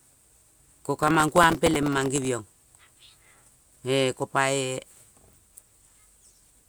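From 0.96 to 2.27 s the speech is torn by processor overload crackle. The processor repeatedly misses its deadlines for very short buffers, around a millisecond or two each. Each miss replays a fragment of stale audio with hard edges, and dozens in a row merge into gritty crackle until the load clears.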